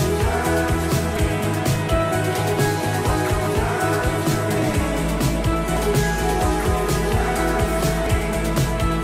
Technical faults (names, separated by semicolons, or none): audio missing between chunks